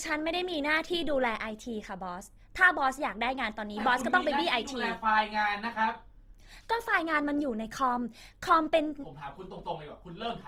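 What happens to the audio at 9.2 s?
At 9.2 s the speech carries the same damage as the rest of the clip: Opus compression, most likely in its music (CELT) mode at a low bitrate, with the roughness fitting something near 24 kbps. Short of bits, the encoder preserves each band's overall energy but fills in the detail by folding copies of lower bands upward or substituting noise. The fullband range survives, yet the speech comes out plainly grainy, rough and noisy in texture.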